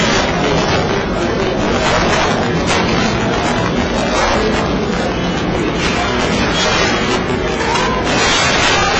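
Throughout the clip, integer overflow occurs: loud peaks driven about 8 dB past full scale wrap to the opposite sign instead of being limited, so a small share of samples produce violent cracks far sharper than clipping. Also throughout, the audio has nothing above 8.6 kHz and carries two layers of codec smearing. This is likely transcoding between lossy codecs, consistent with a low-rate AAC-LC encode at around 16 kbit/s followed by HE-AAC at around 32 kbit/s.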